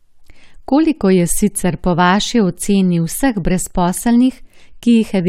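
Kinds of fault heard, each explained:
No faults can be heard.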